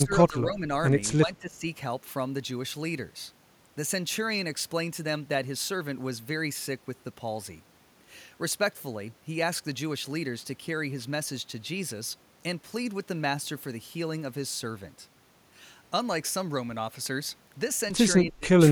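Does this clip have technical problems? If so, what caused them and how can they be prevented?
Yes. The speech dips three times: from 0.01 to 0.67 s by about 10 dB, from 1.25 to 1.64 s by about 20 dB, and from 18.25 to 18.52 s by about 30 dB, nearly cutting out. A waveform shows the envelope sagging abruptly. This is likely speech suppressed in double talk: the echo canceller attenuated the talker along with the far-end echo. Headsets or better double-talk detection prevent it.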